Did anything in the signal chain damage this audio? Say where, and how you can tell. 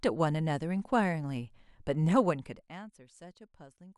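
No, nothing in the chain from capture through playback has left an audible mark on this speech.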